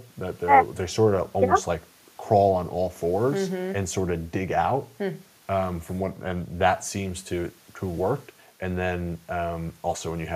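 Nothing technically wrong turns up anywhere in this short speech recording, so there's no fault to time or trace back to a cause.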